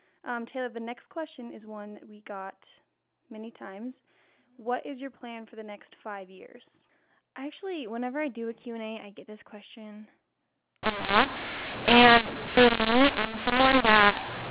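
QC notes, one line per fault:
10.83–14.51 s, mu-law and A-law mixed up. Mu-law telephone audio is decoded as A-law. Levels scramble and quiet samples rise, so speech turns harsh and pauses fill with noise.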